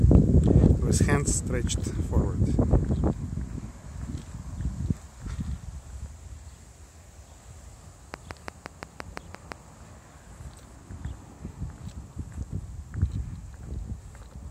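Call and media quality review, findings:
Train of clicks, 8.14 to 9.53 s. Regular ticking, about 5.8 clicks per second, roughly ten in all, each of near-identical shape and peaking around 10 dB above the surrounding sound. Likely external interference or a faulty connection or power supply injecting a periodic pulse into the signal path, independent of the programme audio.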